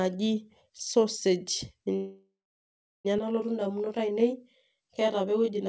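At 1.96 s the speech stops and a call audio freeze begins, lasting until 3.07 s. The last sound carries on and fades, then about 0.7 s of silence. The packets were likely held up in transit, so the jitter buffer ran dry and the receiver filled the gap. When the audio resumes, it picks up where it stopped. Nothing is lost, but the rest of the clip now runs about 1.09 s late.

From 3.18 s to the end, the speech turns rough and slightly doubled. This is channel delay causing comb filtering. One channel lags the other by roughly 20 ms, and the two are summed to mono. Sound common to both cancels at evenly spaced frequencies, with the first notch down around 20 Hz. The notches stay fixed, so the tone stays rough throughout. The G.722 call path also leaves nothing above 8 kHz.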